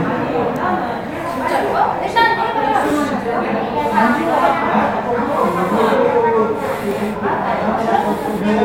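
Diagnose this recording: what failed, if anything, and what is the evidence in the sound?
Stream playback failed with an overlap between stream segments. Tiny skips at 2.90 s and 6.91 s, 4 s apart, fit 4-second segments whose overlapping timestamps were trimmed, deleting milliseconds of real audio. The waveform shows an abrupt step, and the spectrogram a thin full-band vertical line.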